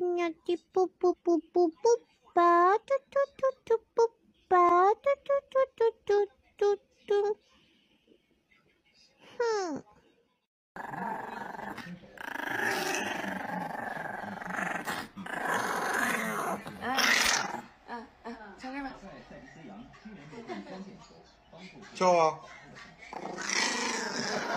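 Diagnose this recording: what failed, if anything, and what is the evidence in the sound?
Codec stage: compressed frames skipped at 1.07–1.14 s. Roughly 50 ms of audio is skipped, so the sound jumps ahead at the join.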